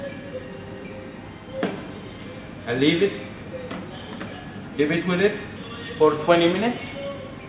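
No technical faults are audible.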